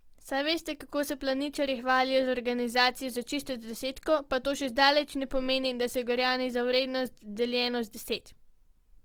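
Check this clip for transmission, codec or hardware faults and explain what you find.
Two faults run through the whole of this speech clip: coding damage that is likely from Opus compression, and sample clock jitter.

Opus compression, throughout: the speech sounds grainy and rough rather than swirly, because the encoder keeps each band's energy but, short of bits, fills the detail with folded or noise-like content. The damage is plainly audible and fits a low music-mode bitrate near 24 kbps. A spectrogram shows full bandwidth up to about 20.3 kHz, with a smeared, noisy texture in the upper bands instead of clean harmonics.

Sample clock jitter, throughout: the converter samples at slightly wrong instants, on the order of a couple of microseconds, so steep parts of the waveform land at the wrong level. The result is a fine hiss riding on the speech, roughly 35 dB below it, that grows on loud and bright sounds and disappears in pauses. 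A spectrogram shows a faint broadband noise floor that follows the speech energy and vanishes in the gaps.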